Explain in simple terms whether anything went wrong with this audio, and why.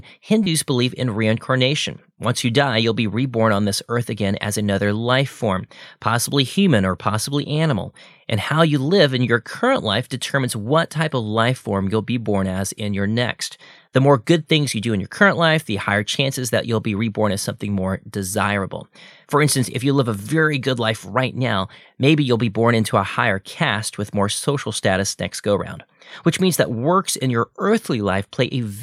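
A short squeak or burst of noise pops out between 0.44 and 0.47 s, right before "believe in reincarnation". It lasts only a few hundredths of a second. This is a corrupt frame decoded. Audio like this is stored in small compressed chunks called frames. Here a couple of frames had some of their data scrambled, and the player played them anyway. The garbled data put sound at the wrong pitches, which is why you hear a brief chirp.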